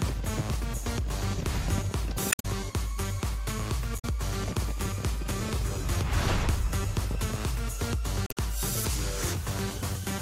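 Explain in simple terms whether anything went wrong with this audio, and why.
Damaged data in a compressed stream causes three brief glitches: 2.29 to 2.46 s, 3.95 to 4.05 s, and 8.24 to 8.37 s. Corrupted bytes confused the decoder, which lost its place and had to search for the next frame.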